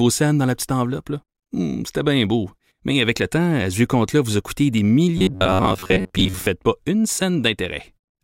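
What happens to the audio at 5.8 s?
Robotic sound from repeated short buffers runs from 5.18 to 6.47 s, after "vous a coûté des". Most of it is likely repeated buffers, giving a rigid, metallic 94 Hz buzz.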